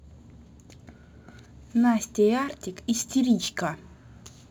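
Throughout the speech, crude rate conversion repeats samples without any filtering, a pattern that fits a 44.1 kHz to 48 kHz change. The error, roughly 25 dB below the speech, is an inharmonic fizz riding loud and sibilant sounds. Unlike codec swirl, it is a grit that follows the speech.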